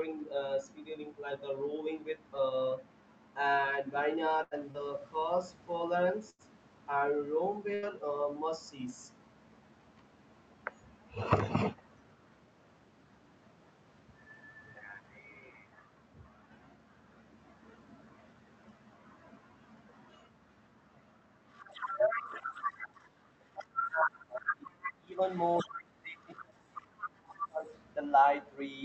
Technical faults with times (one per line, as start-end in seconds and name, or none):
4.43-4.54 burst of packet loss
4.71-4.77 short concealed packet loss
6.30-6.42 burst of packet loss
7.75-7.85 burst of packet loss
21.52-23.09 other side's voice leaking through
23.55-23.65 other side's voice leaking through
23.65-25.21 speech suppressed in double talk
24.33-24.92 other side's voice leaking through
25.30-25.70 other side's voice leaking through
25.64-27.65 speech suppressed in double talk
26.20-26.44 other side's voice leaking through
26.79-27.47 other side's voice leaking through